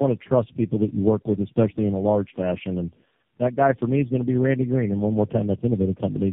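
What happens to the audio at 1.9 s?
At 1.9 s, as across the whole clip, the speech carries tandem speech coding. It passed through three low-rate speech coders in a row, each recoding the last one's damaged output. It sounds rough, muffled and warbly, with nothing above 3.3 kHz.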